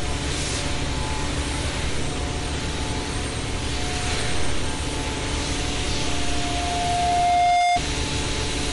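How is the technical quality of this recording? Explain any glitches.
The recording has two clear problems: plainly audible lossy-codec damage throughout and a feedback squeal near the end.

Throughout, a starved encoder, likely MP3 compression at a low bitrate around 48 kbps, has removed everything above 11.1 kHz and drops weak frequency lines from frame to frame. The sound is dull and watery, with a swirling, chirpy texture and smeared attacks.

From 6.04 to 7.81 s, a microphone picked up the loudspeaker it was feeding, and the loop gain exceeded one at 706 Hz. This loudspeaker feedback squeal swells over about a second and a half into a howl sitting about 5 dB above the rest of the sound.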